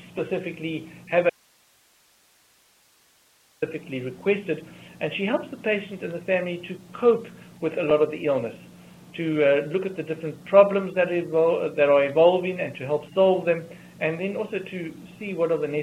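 At 1.30 s the audio cuts out abruptly and stays gone until 3.62 s, a dropout to a faint residue lasting about 2.32 s. What remains in the gap is hiss roughly 40 dB below the normal signal level, with no fade on either edge. The likely cause is a momentary loss of the source feeding the chain while the stages after the break kept running, so their own noise floor carried on through the gap.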